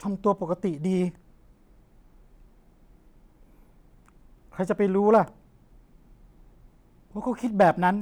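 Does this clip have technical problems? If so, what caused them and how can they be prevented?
Yes. A stage overloaded briefly, causing hard clipping: peaks flattened at 5.14 to 5.18 s (about 2 dB over) and 7.61 to 7.69 s (about 3 dB over), adding brief crackle. Prevent it by setting gain lower so peaks keep headroom below full scale.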